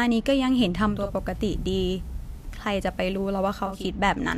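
Digital radio blending to analogue runs from 0.81 s to 3.93 s in this speech clip. The receiver lost its digital stream and cross-faded over 352 ms to the FM broadcast, bringing faint hiss roughly 35 dB down and level about 1 dB lower.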